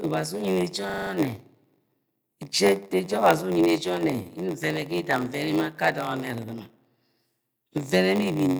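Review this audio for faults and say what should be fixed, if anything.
Block size mismatch (padded) runs the whole way through. There's a steady buzz at about 93.8 Hz, and the speech drags to 0.938 of normal speed with its timbre intact. That fits 480-sample blocks being zero-padded out to 512 at 48 kHz. Make sure both stages agree on block size.

System hang loop from 0.90 to 1.11 s: a 40 ms chunk repeats five times at 25 Hz, giving a rapid stutter, and the speech then picks up again with essentially nothing missing. Fixing whatever stalls the driver or host thread will stop the buffer being replayed.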